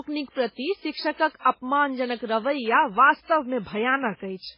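Speech with transcoding between lossy codecs throughout: nothing is present above 5.3 kHz, and the smeared, watery low-rate artefacts sit under a second codec's own coloration. This likely comes from a very low-bitrate MP3 encode, around 16 kbit/s, later re-encoded to WMA.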